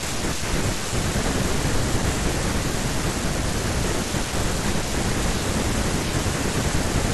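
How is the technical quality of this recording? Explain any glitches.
Nothing trips up here at all; the speech rolls along without a single technical hiccup worth pointing out.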